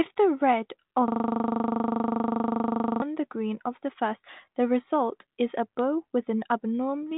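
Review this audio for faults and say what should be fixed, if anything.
System hang loop, 1.08 to 3.02 s, after "the red": the system stalled while the hardware kept replaying one 40 ms buffer, a rapid 25 Hz stutter until "the green of the". To prevent it, give the audio thread real-time priority and add a watchdog that mutes output whenever the ring buffer stops being refilled.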